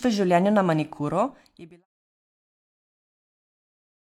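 No technical faults can be heard in the speech. The level eases down in a smooth fade-out that begins at around 1 s and is complete by 1.86 s.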